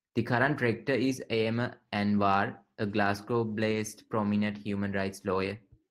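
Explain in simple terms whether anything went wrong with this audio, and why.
Yes, briefly. Around 3.71 to 3.77 seconds of this speech, a lost packet was rebuilt from error correction: a short stretch of data never arrived, but a rougher backup copy sent with the next packet filled in. There's no gap, just a 40-millisecond moment that sounds noisier and coarser.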